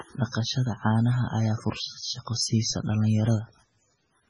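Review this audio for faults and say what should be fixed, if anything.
Heavy MP3 compression affects the whole speech clip. The treble stops sharply, with nothing above 10.4 kHz. Weak frequency lines switch on and off between frames. That gives a watery, swirly texture and smeared onsets. The damage likely comes from a very low bitrate, around 16 kbps. To prevent it, encode at a much higher bitrate or deliver an uncompressed master.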